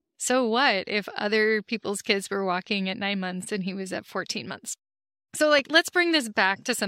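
At 5.59 to 5.61 s a single sharp pop cuts through the speech, standing out by around 10 dB above the surrounding level before vanishing in about 20 ms, while the talking carries on underneath without a break. This is a loud pop, and the likely cause is a sudden voltage step or pulse entering the chain, such as a plug or switch contact, a static discharge or a driver glitch, which the following circuitry shapes into a brief click.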